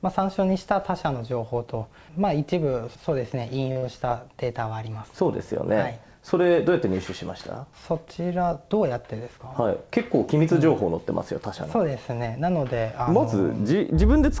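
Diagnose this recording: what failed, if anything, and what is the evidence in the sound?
Network stage, short stall from a late packet: at 3.72 to 3.78 s the sound is held for about 38 ms with a faint buzz or dip, then resumes where it left off. A packet arrived late, the jitter buffer ran dry, and the receiver stretched the last frame. Nothing is lost, but playout delay grows by 38 ms.

Network stage, burst of packet loss: directly after, from 3.78 to 3.84 s, the held sound continues and fades for about 46 ms and the audio resumes roughly 40 ms further on. Consecutive packets never arrived in time, so concealment extrapolated and faded while that stretch went missing.

Jitter buffer speed-up: between 9.04 and 9.38 s the audio runs about 10 percent fast at unchanged pitch and sounds hurried. The buffer was holding more than its target, probably left over from the earlier stall, and trimmed it by cutting out pitch-period slices totalling roughly 40 ms. 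Throughout, the band stops at 8 kHz, consistent with G.722 on the call path.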